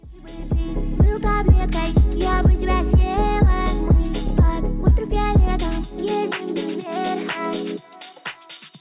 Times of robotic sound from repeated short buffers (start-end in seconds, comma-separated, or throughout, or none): none